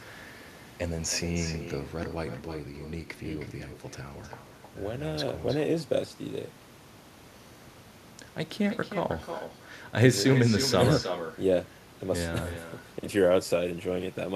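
From start to finish, the far end is playing the call through a loudspeaker while its microphone picks that playback up, and there is no echo canceller to strip it out, so the signal returns over the network as echo with no canceller. Each phrase of speech is trailed roughly a third of a second later by a fainter copy, about 10 dB down, that sounds thinner than the original.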